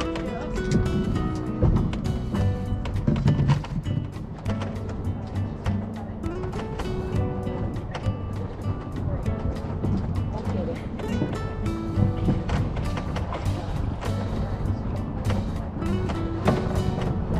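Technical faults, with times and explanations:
No technical faults can be heard anywhere in the signal.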